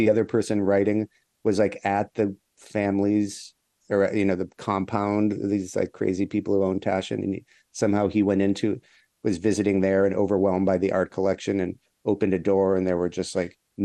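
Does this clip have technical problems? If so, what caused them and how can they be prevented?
Yes. The speech has most likely passed through MP2 compression at too low a bitrate; the damage points to something around 80 kbps. MPEG Layer II divides the signal into 32 sub-bands and shares bits among them, so with this few bits the upper bands get switched off and the rest are coarsely quantised. Throughout the clip the speech sounds dull, with a plainly audible gurgling, granular texture as bands flicker in and out. To prevent it, encode at a higher bitrate or use a more efficient codec.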